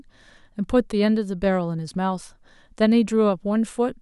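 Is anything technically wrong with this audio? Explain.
No, nothing is technically wrong with this speech recording. No fault can be heard at any point in it.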